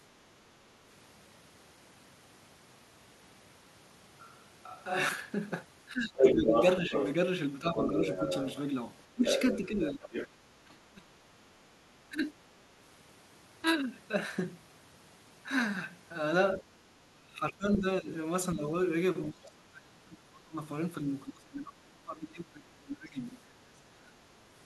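From 5.92 to 8.07 s, speech suppressed in double talk appears as choppy dips of roughly 10 dB totalling under a second. The likely cause is the echo canceller ducking the talker while the far end is also active. Overlapping this, from 6.18 to 10.28 s, the other side's voice leaks through at a level somewhat louder than the talker, most likely echo the canceller failed to subtract from the microphone. Further suppression follows at 9.15 to 11.14 s with cuts of about 25 dB, and at 12.09 to 12.35 s with a brief dip of about 10 dB. The longest stretch runs from 16.62 to 24.15 s, with roughly five seconds of gaps reaching about 25 dB. Within it, at 17.74 to 17.78 s, a faint scrap of the far-end voice slips through well below the talker.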